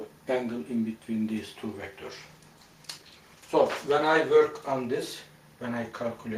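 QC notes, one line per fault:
2.06–5.25 s call bitrate drop: encoder rate falls from 32 to 16 kbps, lowest for 2.1 s; coarser coding sounds rough, spectrogram turns blotchy.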